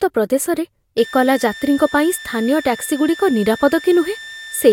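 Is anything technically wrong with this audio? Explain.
Yes. From 0.98 s to the end, a switching supply whistle sits under the speech. A switching power supply is running in an audible burst mode or beating with another one. It gives a steady high tone near 1.8 kHz, about 20 dB below the speech.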